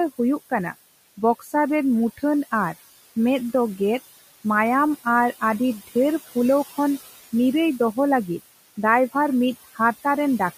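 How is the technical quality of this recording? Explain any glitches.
Noise suppressor artifacts run through the whole recording, and there is one brief speech cut near the start. The room noise sits about 16 dB below the speech.

Throughout, the suppressor lowers the background by about 15 dB between phrases and lets it return under speech. On a spectrogram, the noise floor pumps in step with speech.

From 1.39 to 1.52 s, speech is cut by the noise suppressor. It mistakes soft speech for noise and drops it by up to about 10 dB, so the sound comes out swallowed. The waveform envelope shows a sudden notch there.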